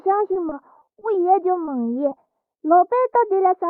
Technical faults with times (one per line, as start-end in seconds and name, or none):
0.33-1.03 repeated packet loss (robotic sound)
1.65-1.69 short concealed packet loss
2.09-2.13 short concealed packet loss